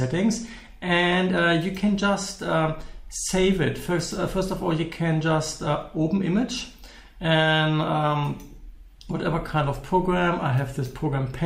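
No technical faults are audible.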